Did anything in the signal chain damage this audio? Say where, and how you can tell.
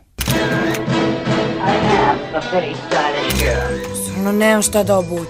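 No, nothing along the chain has left an audible mark here, and the signal holds steady with no dropouts, clipping, noise bursts or timing disturbances at any stage.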